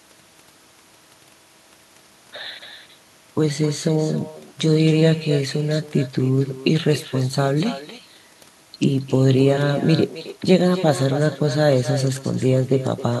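Speech runs from start to finish with echo with no canceller: every phrase returns roughly a third of a second later, about 15 dB down and thinner. The far end's loudspeaker output reaches its microphone and is sent back across the network without being cancelled.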